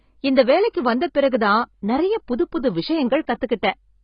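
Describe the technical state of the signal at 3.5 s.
At 3.5 s the speech carries heavy AAC compression damage, likely from AAC-LC coding, present throughout the clip rather than at that moment alone. Nothing remains above 5 kHz, a sign that the encoder lowered its cut-off to save bits, which points to a very low bitrate of around 16 kbps. Quantising the spectrum that coarsely against a hearing model leaves the sound dull and smeared, with a warbling, fizzy texture.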